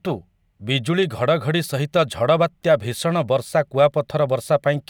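Nothing in this short speech recording stands out as a technical problem; it simply sounds the way a normal recording should.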